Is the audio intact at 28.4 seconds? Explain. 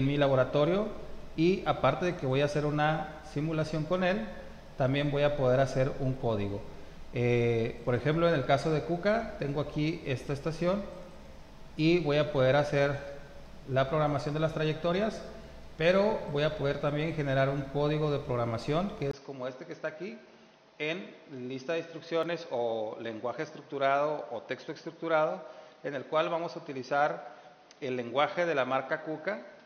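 No. From 19.11 s to the end, the input has likely switched to a poorer device. After a 20 ms gap, the sound goes dull and boxy with nothing above 6.3 kHz, drops about 5 dB, and picks up a new noise floor roughly 35 dB down.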